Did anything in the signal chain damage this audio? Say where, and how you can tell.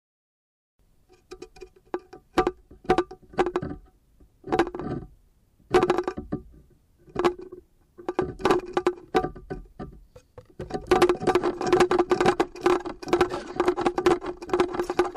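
Yes, at the codec stage: a corrupt frame decoded, once at 7.51 s and again at 14.84 s, each a brief error of roughly -40 and -30 dBFS. Flipped bits sent energy to the wrong frequencies for a few frames. That spectral misplacement separates it from a broadband click or a silent dropout.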